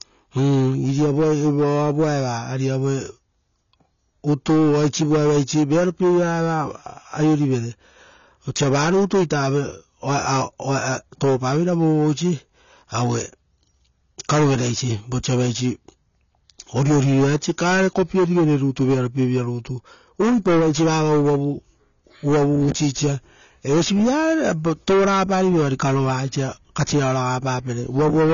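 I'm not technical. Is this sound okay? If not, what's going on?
No. The speech sounds dull and smeared for the whole clip, with a fizzy, warbling edge on hissy sounds. Nothing above 6.9 kHz survives. This is likely AAC compression squeezed too hard, throwing away fine detail to save space.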